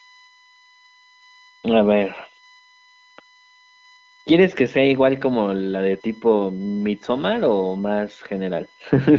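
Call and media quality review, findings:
USB whine, throughout: steady fixed-pitch tone on a 1 kHz fundamental, strongest at its 2 kHz harmonic, about 35 dB below the speech. Likely the bus's 1 ms frame current leaking through power or ground. Speech is band-limited near 7 kHz, consistent with wideband (HD Voice) coding.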